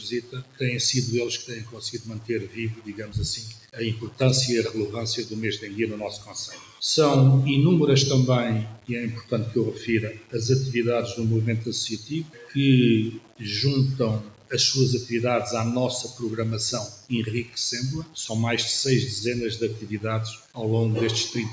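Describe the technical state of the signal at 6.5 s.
At 6.5 s the signal was likely quantised to very few steps and truncated with no dither, consistent with roughly a 5-bit word. Because the rounding error tracks the waveform, it lands only around 20 dB below the sound itself. The result is a coarse, grainy distortion that shifts with the sound. Quieter parts turn gritty and the faintest moments sputter between adjacent steps instead of fading smoothly.

A noise suppressor built for speech is also running on this non-speech material. It reads sustained tones, ambience and decay as noise and keeps pulling them down, with the gain swinging by about 10 dB. Onsets mostly pass, while anything held or fading gets dragged under, so the sound pumps and thins rather than sitting at a steady level.

The moment falls inside a stretch from 6.17 to 6.81 s where the noise suppressor cut this sound harder than the rest. 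Over roughly half a second it judged the material as noise and attenuated it, reaching a deepest drop of about 9 dB. What sustains there sinks in level or has its tail cut short. Sharp transients still poke through. The bandwidth stops at 8 kHz, as expected from the call microphone processing.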